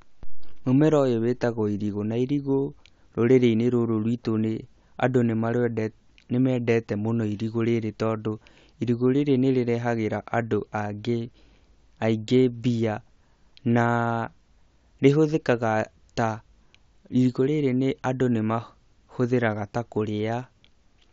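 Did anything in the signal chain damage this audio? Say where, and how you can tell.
No, nothing in the chain damaged this speech.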